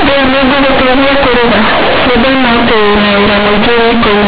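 From the first moment to the end, the speech carries companded audio read as linear. The bytes were coded as A-law, but the player treats them as plain 8-bit samples and skips the expansion step. Tiny sign changes now jump across half the output range. Soft and loud passages come out equally huge. The result is harsh, very loud buzzing distortion, with heavy noise filling the pauses. Nothing above 4 kHz comes through, as expected for 8,000-sample telephone coding.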